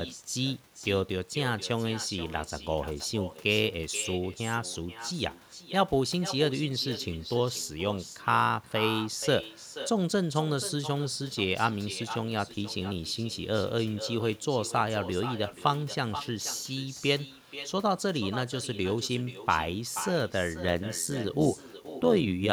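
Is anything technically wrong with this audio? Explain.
Yes. Throughout, the speech is shadowed by a quieter, thinner copy about 13 dB down, arriving around half a second later: echo with no canceller, a far-end loudspeaker feeding back uncancelled.

From 20.68 s to the end, a metallic buzz appears: overlap-add ripple, with level swinging about 11 dB around 100 times per second because reassembled frames don't sum evenly.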